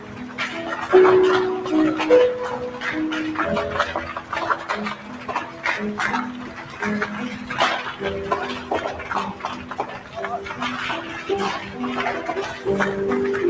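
Throughout, a speech-oriented noise suppressor is acting on non-speech sound, treating sustained and ambient content as noise and pulling it down. Gain swings of roughly 10 dB make held material pump and thin while attacks pass through. The band-limiting to 8 kHz from the call microphone path is expected.

Sound cut by the noise suppressor occurs at 0.00–0.39 s and 4.17–4.32 s (deepest drops about 8 dB), then 4.95–5.65 s, 6.41–6.82 s and 9.33–10.17 s (about 7 dB). Steady or decaying passages sink audibly, with tails cut short.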